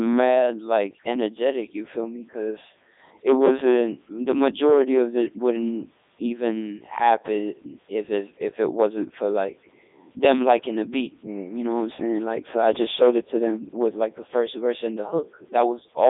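From start to finish the speech passes through a Codec 2 vocoder. The waveform itself is not carried. Only pitch, voicing, energy and a rough spectral envelope survive, and the decoder rebuilds the voice from sine waves. The result is heavily damaged, robotic and buzzy. The band runs from about 250 Hz to 3.7 kHz, with nothing above 3.8 kHz. That sound fits Codec 2's top 3.2 kbit/s mode.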